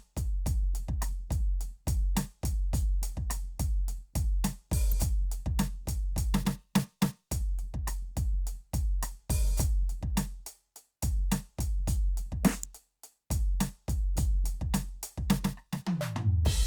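Electrical switching spikes land at 4.92 s and 12.63 s, each a sharp snap or tight cluster of clicks on top of the music. The second peaks near -15 dBFS, louder than the first at about -20 dBFS. Likely cause: a nearby switch or motor arcing, picked up by the audio line.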